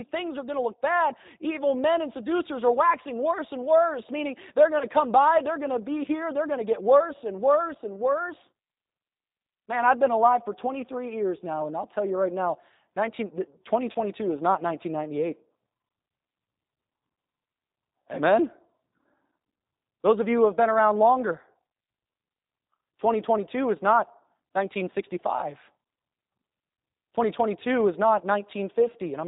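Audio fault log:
Throughout: G.729 codec. Plainly audible 8 kbit/s coding rebuilds the speech from a vocal-tract filter and sparse pulses, leaving it rough, synthetic and cut off above 4 kHz.
4.79–4.86 s, 13.93–13.98 s, 19.58–19.60 s: VoIP packet loss concealed by the speech codec. About 20 ms of audio is missing each time, consistent with one dropped packet. The decoder stretches the previous frame into a brief buzzy or noisy, fading fill, and the speech stays weakened or distorted for a short time after.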